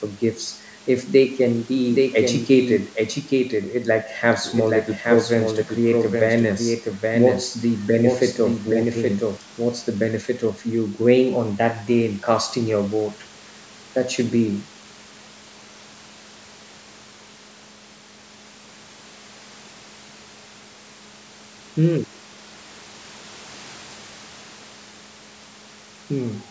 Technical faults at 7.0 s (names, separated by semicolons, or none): doubled audio track